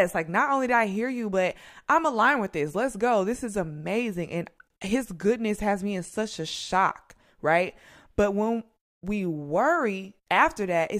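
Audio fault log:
No fault found in this speech clip.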